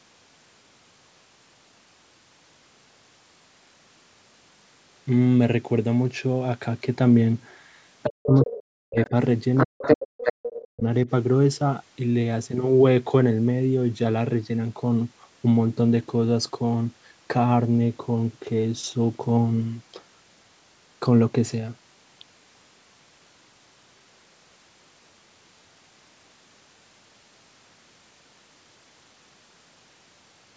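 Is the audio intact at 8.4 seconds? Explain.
No, 8.4 s sits inside a stretch of speech suppressed in double talk, running from 8.05 to 9.12 s. The talker's voice sinks by around 40 dB, likely because the echo canceller couldn't tell the talker apart from loudspeaker echo while both sides spoke, so it clamped everything down.

Right in that window, from 8.35 to 8.51 s, the other side's voice is leaking through, sitting roughly 10 dB under the talker. It's a brief scrap of a second voice, likely loudspeaker playback that the echo canceller didn't fully strip out.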